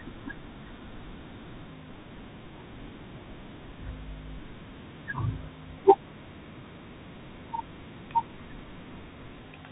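Throughout, the speech carries the sound of a Bluetooth CVSD headset codec, plainly audible and consistent with a 64 kbps headset link. Nothing above 4 kHz survives. Each sample is one up-or-down bit, and the step lags loud high sounds. S sounds turn scratchy. A granular hiss sits underneath.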